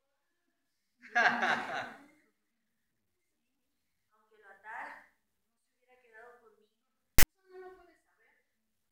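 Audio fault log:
7.19 to 7.23 s, file tags played as audio: a text tag block gets read as samples, so you hear a harsh, lopsided rasp with abrupt edges.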